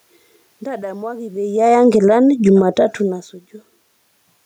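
From 1.5 to 3.72 s, automatic gain falling: the gain control judged the input too loud and pulled its gain down by about 6 dB, so speech and room noise sink together. From 2.07 to 3.09 s, automatic gain rising: after the input dropped by about 23 dB as the talker moved, the control raised gain by about 5 dB, swelling voice and background together.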